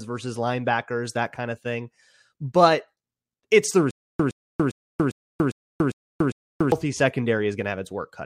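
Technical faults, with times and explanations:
3.91–6.72 s, stutter with silent gaps: the playback or stream likely stalled, and on each retry it replayed the last fragment it still held before running empty again. The sound is one 115 ms burst of speech repeated seven times, each followed by 287 ms of dead digital silence, so it returns at a steady pace of one every 402 ms. The speech that should have filled this stretch is lost.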